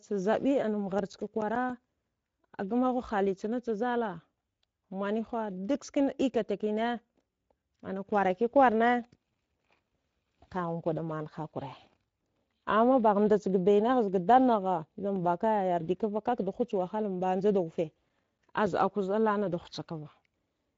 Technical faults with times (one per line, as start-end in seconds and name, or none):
0.00-20.77 Speex codec
0.84-1.84 CD scratch ticks
17.81-18.95 CD scratch ticks